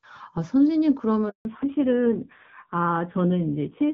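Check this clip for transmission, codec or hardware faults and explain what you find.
Two transmission faults occur in this speech, back to back, partway through.

A handover gap runs from 1.29 to 1.45 s. The call switches networks, no frames arrive for 160 ms, and the sound falls to true silence rather than a concealed smear.

A fallback to narrowband follows from 1.45 s to the end. Everything above 4 kHz vanishes, and the speech turns dull and rough. The raspiness, beyond a bandwidth cut, points to a low-rate narrowband codec around 5.9 kbit/s. Before the switch, the HD Voice path carries clear wideband speech.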